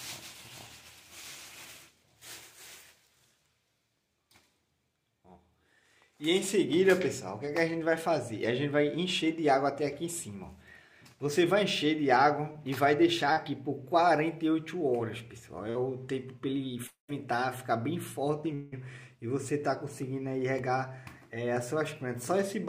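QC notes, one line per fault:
7.45 to 15.77 s, short concealed packet loss: brief smears or wobbles at 7.45, 12.52, 13.33 and 15.70 s. Between 20 and 40 ms of audio was missing each time, and the receiver filled it by extending the preceding sound, then crossfaded back.
16.87 to 18.74 s, long network dropout: at 16.87 s a continuation of the last sound fades, leaving about 0.12 s of silence before the audio resumes at 17.10 s. At 18.54 s a fading fill of roughly 0.18 s bridges the gap with no silence. Both likely come from about 0.22 s and 0.18 s of audio never arriving.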